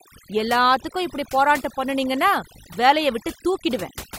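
From the first moment to the last, the speech carries overdone noise removal. A noise reduction stage was pushed far too hard, so any frequency band that sits close to its idea of the noise gets pulled way down or shut off entirely, and the softer parts of the voice get caught in that. You hear it as a background that drops away and breaks up into little twinkling specks.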